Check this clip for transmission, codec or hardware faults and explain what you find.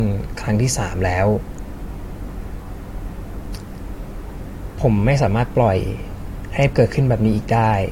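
One codec fault runs through the whole speech clip. Nothing sounds above about 16.6 kHz, and the artefacts of a coarser earlier encoding remain. The likely cause is low-bitrate audio saved at a high bitrate: a coarse first encoding, perhaps around 64 kbit/s, re-saved as a large MP3 that can't restore what was discarded.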